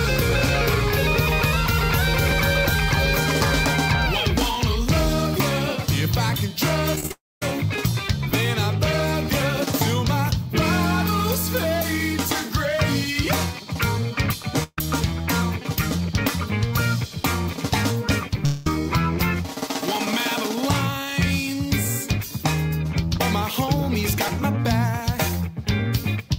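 Evenly spaced ticks run through the whole recording, one every 2.0 s from 0.33 s to 26.28 s, about fifteen in all, and they are audible only where there is signal underneath. These are periodic USB or driver dropouts: on a fixed two-second schedule something stalls the audio path and a few milliseconds of samples are simply skipped, so the waveform jumps and clicks rather than falling silent.

Between 6.95 s and 7.11 s the sound turns choppy, with six small holes (the longest 18 ms) patched by repeating what came just before. Over forty percent of that stretch is filler. This is repeated packet loss giving a robotic sound, with late or missing packets arriving too often for smooth concealment.

Straight after, from 7.12 s to 7.42 s, the last sound hangs on as a decaying buzz or hiss, then drops to about 220 ms of silence. When audio returns, roughly 0.3 s of material is gone. The likely cause is a long network dropout, during which nothing arrived and the receiver extended the final fragment until it ran out.

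At 14.63 s to 14.78 s a shorter hole appears: about 140 ms is lost, bridged by a held, fading continuation that ends in a brief 30 ms silence before the sound resumes further along. This is a burst of packet loss, several consecutive packets missing and concealed by stretching and attenuating the preceding sound.

From 18.45 s to 18.67 s there is likely another long network dropout. About 200 ms is missing, and the concealment fills the entire gap without ever reaching silence, so the jump to later material comes abruptly out of the fading continuation.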